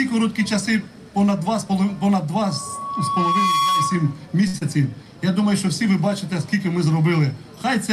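From 2.41 to 4.19 s, a loudspeaker feedback squeal builds over about a second into a steady 1.1 kHz tone, roughly as loud as the programme, as the mic-speaker loop gain exceeds unity. At 4.47 to 4.56 s, a short stall from a late packet holds the sound for 65 ms while the jitter buffer waits, shifting timing without losing any audio. At 4.58 to 4.63 s, a short concealed packet loss covers 40 ms of missing audio with a brief synthesised continuation, heard as a quick smear.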